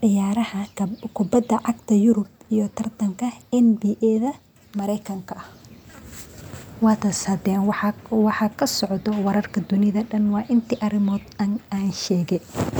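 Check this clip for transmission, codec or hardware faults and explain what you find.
Nothing in the recorded speech points to a transmission, codec or hardware fault, and the signal holds steady throughout.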